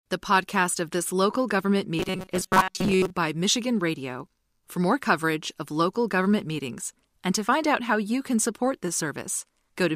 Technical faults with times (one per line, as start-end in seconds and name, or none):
1.99-3.10 robotic sound from repeated short buffers